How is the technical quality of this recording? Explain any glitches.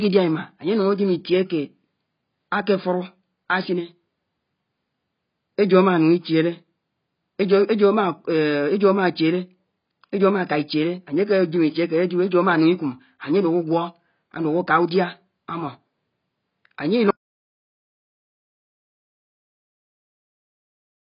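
The technical quality is poor: the speech is heavily band-limited and smeared throughout, and it cuts to dead silence before the end.

AAC compression, throughout: nothing survives above about 5.1 kHz, so the speech sounds dull and muffled, with a warbling, fizzy texture on vowels and sibilants. This is likely heavy AAC-LC coding at a very low bitrate, which fits roughly 16 kbps, discarding and coarsely quantising spectral detail.

Audio dropout to silence, from 17.10 s to the end: the speech stops abruptly mid-flow and is replaced by silence with no room tone. This likely comes from the input signal being lost while the recorder kept writing silence, so whatever followed is missing.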